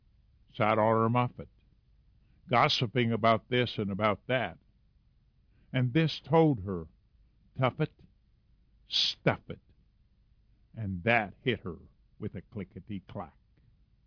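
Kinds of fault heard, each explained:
No kinds of fault are heard in this clip.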